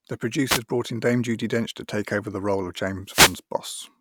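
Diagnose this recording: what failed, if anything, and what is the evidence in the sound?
Wireless microphone noise hits at 0.48 to 0.60 s and 3.06 to 3.39 s, in the analogue radio link ahead of the converter: brief swishes of static are heard as the FM signal fades through reflection cancellation and receiver noise rises.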